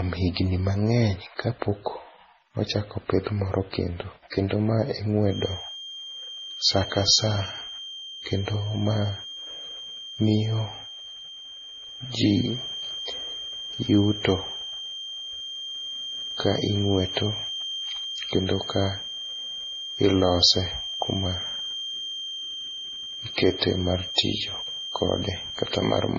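Throughout the speech, the audio has likely been transcoded between lossy codecs, with artefacts pointing to a low-bitrate MP3 encode followed by a low-bitrate AAC encode. Nothing survives above 6.9 kHz, so the speech sounds dull, and each codec's smearing and swirly artefacts stack on the other's.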